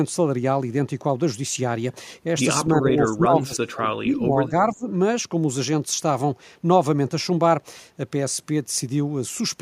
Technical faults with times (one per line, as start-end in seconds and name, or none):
2.68-4.87 speech suppressed in double talk